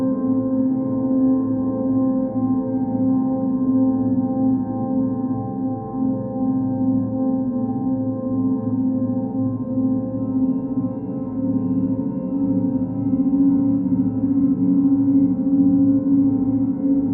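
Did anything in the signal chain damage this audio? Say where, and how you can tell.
No, nothing in the chain.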